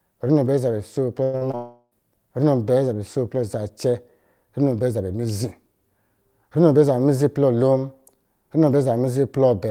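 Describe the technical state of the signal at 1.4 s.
At 1.4 s the signal is inside a short concealed packet loss running from 1.37 to 1.43 s. About 40 ms never reached the decoder in time, so the receiver extended the preceding sound and blended back into real audio. It is heard as a brief smear or wobble. On a spectrogram it shows as a smudged, slightly blurred patch where harmonics lose definition. The waveform looks smooth and repetitive instead of naturally varied.

Just before it, a burst of packet loss spans 1.23 to 1.35 s with about 100 ms missing. The receiver continued the last sound while fading it down, giving a held buzz or fading hiss, then resumed further on. A spectrogram shows flat, frozen harmonics or noise thinning out, followed by an abrupt jump, and the waveform shows a decaying envelope.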